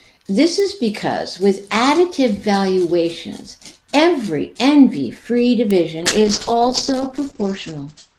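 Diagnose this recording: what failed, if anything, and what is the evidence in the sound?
Bit error spikes at 0.60 s, before "is because with additive", and at 5.71 s: single-sample broadband ticks from a flipped bit in digital transfer. Unlike a dropout, nothing goes missing.

A call bitrate drop from 6.02 s to the end, 40 to 10 kbps: network bandwidth estimation starved the codec, muffling everything above 8 kHz and coarsening speech rather than cutting it.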